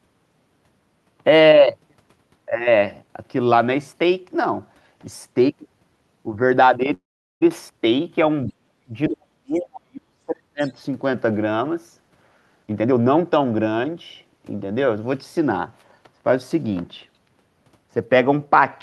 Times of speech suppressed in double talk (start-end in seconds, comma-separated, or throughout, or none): 8.47-10.62